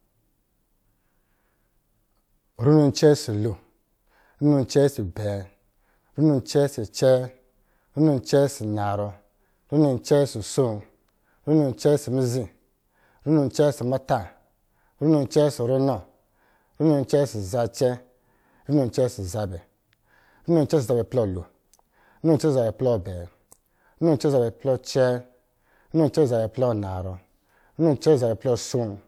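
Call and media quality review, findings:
No faults found in recording.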